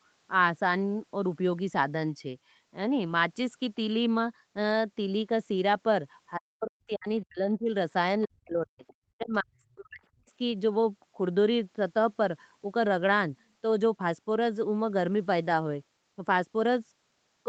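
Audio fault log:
6.36–7.71 s, 8.25–8.85 s, 9.17–9.57 s and 9.76–10.28 s: speech suppressed in double talk. The talker's level collapses by up to about 40 dB in patches, likely because the echo canceller mistook overlapping far-end talk for echo. Unlike a network dropout, the speech fades and chops rather than cutting cleanly.
8.87–8.94 s: other side's voice leaking through. A brief, faint scrap of a second voice, about 30 dB below the talker, slips in right after the suppression ends, likely residual loudspeaker echo the canceller failed to remove. It is an added sound, not a loss of the talker, and like the rest of the clip it passes through the Opus call path's 8 kHz band limit.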